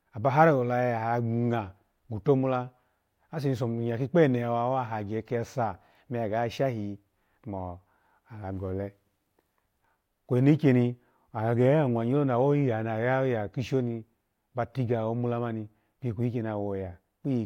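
No technical faults can be heard in this recording.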